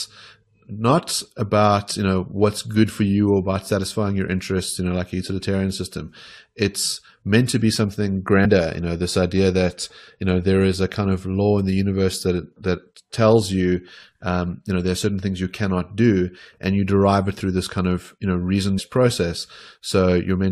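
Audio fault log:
8.44 s and 18.77 s, compressed frames skipped: after "meant to be something" about a tenth of a second of speech vanishes before "you know this idea", and after "of you know reason" roughly a fifth of a second goes missing. Whole 23.2 ms codec frames, around four and then around ten, were never decoded. The audio jumps ahead by the length of the frames left out. A spectrogram shows an abrupt content discontinuity at each join.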